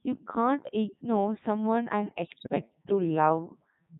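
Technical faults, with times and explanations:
Throughout, Codec 2 vocoder: the speech has been carried at a very low rate, which fits 3.2 kbit/s, with only pitch, voicing, energy and a spectral envelope surviving. The decoder rebuilds the voice from sine waves rather than keeping the waveform, so it comes out heavily robotic and buzzy. Unlike ordinary codec smearing or swirling, the damage is steady and synthetic across the whole clip, not tied to any moment.
2.25 to 2.49 s, bit errors on digital voice radio: for about a quarter of a second the synthetic voice lurches in pitch, loudness and tone colour, breaking into warbling, bleeping gibberish. Flipped bits at roughly a 7 percent rate corrupted the frame parameters, so each damaged frame is resynthesised with wrong pitch, level or spectrum. The damage points to about eleven frames. Unlike a dropout, the sound keeps going but turns into nonsense.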